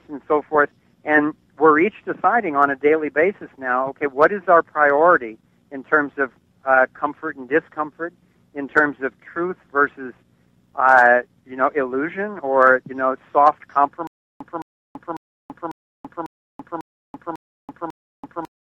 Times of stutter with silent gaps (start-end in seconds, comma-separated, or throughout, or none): 14.07-18.68